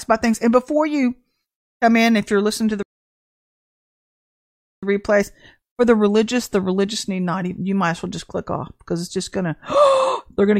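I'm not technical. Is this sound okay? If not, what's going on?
No, there's one clear problem. At 2.83 s, right after "you're listening to the", the speech suddenly cuts out and goes silent for two full seconds, then picks up at 4.83 s with "replays for the religious". That's a playback stall: the player most likely ran short of audio to play, or got held up for a moment, so it simply went quiet until it caught up again.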